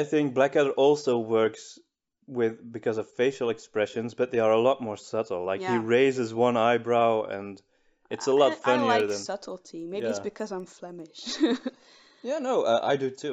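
A resampler restarted on every block runs from 8.8 to 11.1 s. Across that stretch a regular ticking at 10 per second rides on the sound, one tick every 100 ms, which points to the audio being converted in 100 ms blocks, likely upsampling from 16 kHz to 48 kHz. Each block was processed in isolation, so the converter's filter lacked the true neighbouring samples at both edges and left a small discontinuity at every seam.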